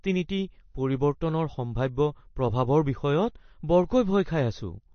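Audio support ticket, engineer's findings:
Watery, swirly speech throughout, dull top end, sibilants smeared and chirpy. Spectrogram: hard shelf with nothing above 6.4 kHz, speckled gaps where weak bins drop in and out frame to frame; waveform looks normal. Likely MP3 compression, starved encoder cutting treble and zeroing quiet frequency lines; damage level fits a 32 kbps encode.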